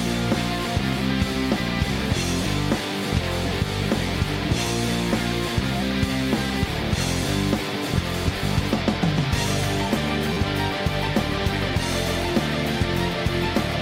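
At 10.33 s, running to 10.37 s, there is a repeated buffer. New audio failed to arrive in time, so the output played the same block of about 11.6 ms again, three extra times, which fits a 512-sample buffer. Each repeat meets the previous one at a hard join, so the roughly 35 ms span is heard as a brief buzzy stutter rather than a dropout. Practically no audio is lost, and the sound resumes where it left off.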